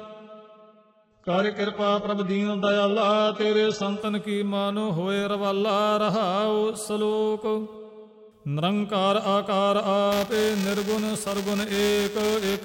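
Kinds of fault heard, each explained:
Adaptive stream starting at a low bitrate: The player opens on a cheap, fast-starting version of the stream, so for the first 4 seconds nothing is above 8 kHz and the sound is thin and smeary, like a very low-bitrate HE-AAC start. It then jumps cleanly to full quality, with no gap.
Buffer tearing: From about 10.12 s to the end, the writing and reading sides of the ring buffer have drifted into each other. A sliver of each buffer replays audio from about 10 ms earlier, giving a gritty 345 Hz buzz, which fits a 128-sample buffer.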